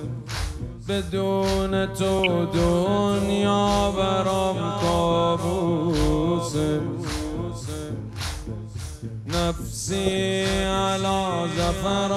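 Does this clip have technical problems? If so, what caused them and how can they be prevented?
Yes. DAB burbling appears twice, from 2.09 to 2.27 s and from 10.06 to 10.17 s. Weak reception let a few tenths of a percent of bits slip past error correction into the MP2 stream, so corrupted samples put short blips of noise in single sub-bands. Improving signal strength with a better-sited aerial prevents it.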